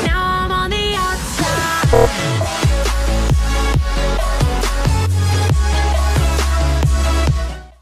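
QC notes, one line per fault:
1.92–2.07 s, repeated frames: the same 26.1 ms slice plays five extra times, giving a rapid stutter, and it lengthens the audio by 130.6 ms. Unlike a dropout, nothing goes silent. One compressed frame is being duplicated.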